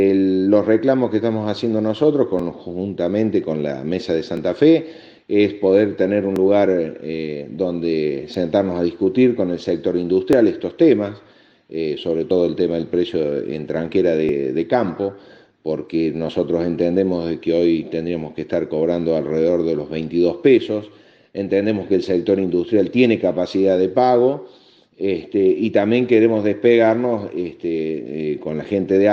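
Overlap between stream segments at 2.39, 4.37, 6.36, 8.34, 10.33, 12.31, 14.29 and 16.29 s: overlapping 2-second segment timestamps cause 5 to 16 milliseconds of sound to be cut, giving regular tiny skips.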